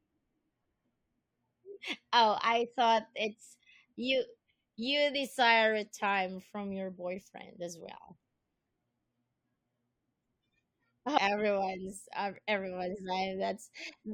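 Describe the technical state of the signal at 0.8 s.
At 0.8 s the speech signal is intact, with no audible technical fault at that moment.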